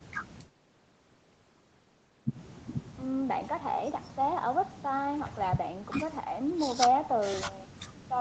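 No technical faults can be heard in this speech. The sound stops at 8 kHz, which fits the band limit of the Opus codec on the call path and the call's microphone processing, both working as they normally do.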